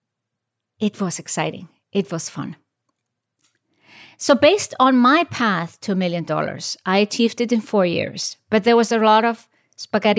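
No audible technical faults turn up anywhere in this speech recording.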